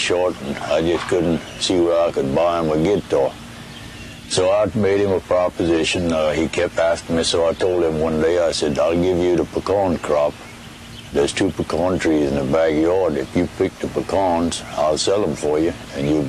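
From 4.23 to 8.23 s, the connection slowed and the adaptive stream switched to a lower bitrate for four seconds. The sound points to a drop from about 96 kbit/s AAC to about 32 kbit/s. With far fewer bits to spend, the encoder discards more detail, so codec artefacts rise across that stretch. The quality changes abruptly at both boundaries, with no gap, and the fuller sound returns at 8.23 s.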